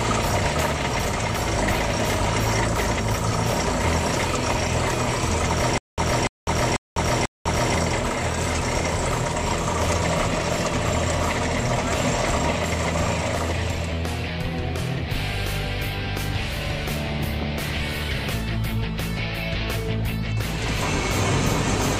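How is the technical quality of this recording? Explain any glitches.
There's one real glitch, a stutter with silent gaps between about 5.78 and 7.75 s. The same short burst of roughly 292 ms plays four times, each followed by about 200 ms of dead digital silence, so it ticks along at a steady 492 ms cycle. That's likely the player or stream stalling and replaying its last buffered fragment on each retry before running dry, and whatever audio belonged in that stretch is simply gone.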